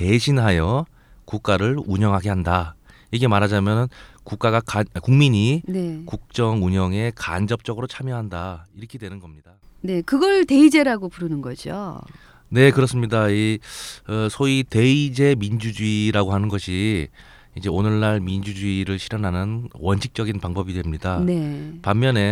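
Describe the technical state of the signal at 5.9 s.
At 5.9 s the speech signal is intact, with no audible dropout, clipping, distortion or other fault at that point.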